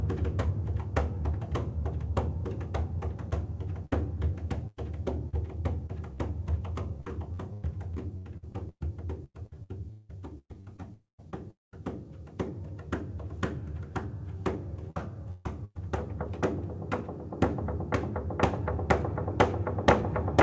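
From 3.30 s to 11.35 s the everyday sound turns choppy and robotic, with 24 short holes, the longest 178 ms, and about 17% of that stretch patched over. This is repeated packet loss: packets kept going missing, and each hole was filled by stretching out the preceding sound.

From 10.93 s to 11.20 s, and again from 11.51 s to 11.74 s, the sound smears into a fading buzz and then falls silent, for about 150 ms and 180 ms. These are likely long network dropouts. Nothing arrived for roughly a quarter second each time. The receiver extended the last audio until it died away, and that portion is gone.

Between 14.90 s and 15.77 s the robotic chopping returns in three gaps, the longest 139 ms, covering about 34% of the span. This is the same repeated packet loss, with concealment filling each hole. Throughout, the G.722 call codec leaves nothing above 8 kHz.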